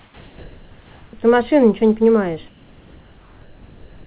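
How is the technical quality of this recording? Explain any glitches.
The speech comes through a narrowband call path with nothing above 4 kHz, and both pauses have a fault, comfort noise in place of the background. From 0.0 to 1.13 s and from 2.48 s to the end, the real background becomes a flat, featureless hiss, about 2 dB louder in the first pause and about 2 dB quieter in the second. This is likely because the sender stopped transmitting during silence and the receiver generated noise that only roughly matches the background.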